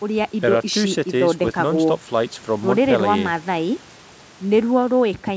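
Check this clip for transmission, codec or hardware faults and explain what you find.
No transmission, codec or hardware faults turn up in the speech, which carries the normal bandwidth of a call path: the microphone processing leaves nothing above 8 kHz, and G.722 wideband coding at 64 kbit/s leaves at most a faint trace.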